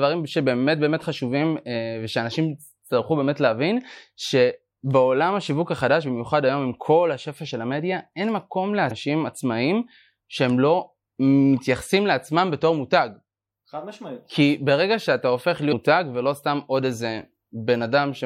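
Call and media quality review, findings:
Two short glitches in the speech, 8.87–8.91 s and 15.69–15.73 s, each roughly 40 ms. Looks like damaged data in the compressed stream: the decoder hits corrupt frames, loses sync, and spits garbage briefly until it locks onto the next valid frame header.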